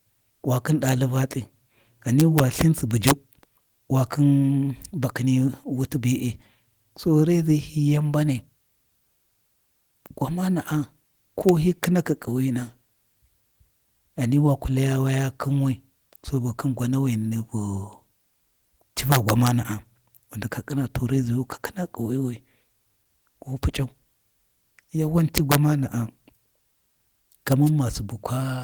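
Speech, marred by integer overflow on its loudest peaks. Violent cracks land at 0.89, 2.20 to 2.61, 3.07 to 3.11, 11.49 to 11.84, 19.12 to 19.47, 25.38 to 25.55 and 27.52 s. Gain pushed peaks up to about 7 dB past the integer limit. They wrapped to the opposite sign instead of being held. Right after, at 27.65 to 27.70 s, a wireless microphone noise hit brings a brief burst of static. The FM radio link faded and receiver noise rose over the signal.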